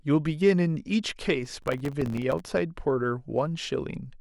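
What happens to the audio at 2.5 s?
At 2.5 s the processor overload crackle ends. It runs from about 1.45 s to 2.50 s. The processor repeatedly misses its deadlines for very short audio buffers, consistent with blocks of roughly 1.5 ms, and each missed block drops out to silence with hard edges. Dozens of these dropouts in a row make a gritty, tearing crackle over the speech. On a waveform it looks like a dense comb of brief flat gaps, and on a spectrogram like a field of thin vertical broadband streaks.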